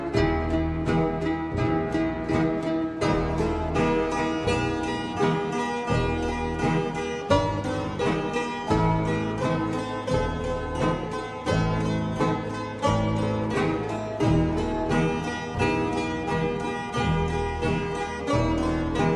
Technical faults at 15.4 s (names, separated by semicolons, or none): wrong sample rate